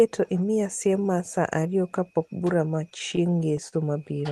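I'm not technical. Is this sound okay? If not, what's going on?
No. There are repeated stalls (stutter) from about 2.75 to 3.75 s, right after "saa ariyo kapok bura". The audio arrived late, so playback ran dry eight times, each up to 44 ms, and the gaps were filled by stretching the last sound, making the speech drag and stutter.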